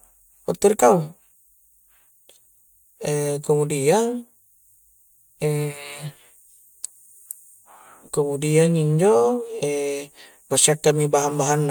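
Listening through this speech recording, nothing stood out as a technical problem.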